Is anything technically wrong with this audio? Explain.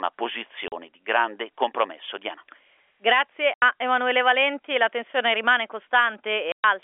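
Yes. The speech is cut by packet loss filled with silence, at 0.68 to 0.72 s, 3.54 to 3.62 s and 6.52 to 6.64 s. Packets went missing in transit, and the receiver played plain silence in their place rather than concealing the loss. The holes last 40, 80 and 120 ms, all multiples of 20 ms, which points to 20 ms packets. Each gap stops the sound abruptly, with hard edges. The narrow telephone band, about 300 Hz to 3.4 kHz, comes from the G.711 line coding.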